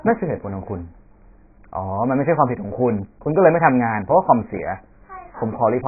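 From start to finish the speech sounds badly band-limited, with nothing above about 2.5 kHz, so it comes across dull and boxy, and sibilants turn into a smeared, fizzy wash. Vowels carry a watery warble too. That's likely AAC compression, with AAC-LC squeezed down to something like 12 kbps. At that rate the encoder drops the top of the spectrum and quantises what's left so coarsely that gaps and substitute noise creep in.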